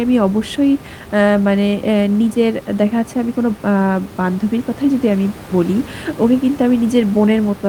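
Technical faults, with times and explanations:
Nothing to flag here, just a bit of ordinary room noise sitting about 17 dB under the speech, which is part of the recording itself.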